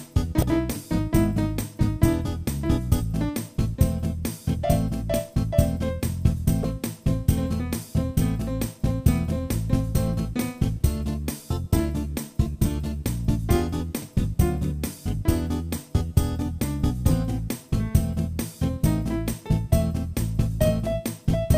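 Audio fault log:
0.39–0.43 s and 6.61–6.64 s, damaged data in a compressed stream: corrupted frames force the decoder to lose sync and hunt for the next header, giving two brief disruptions.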